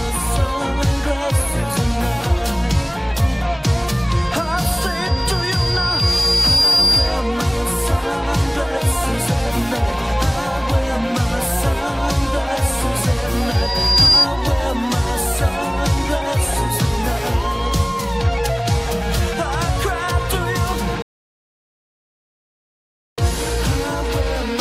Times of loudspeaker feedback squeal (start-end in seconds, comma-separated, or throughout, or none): 4.15-7.34, 13.36-14.27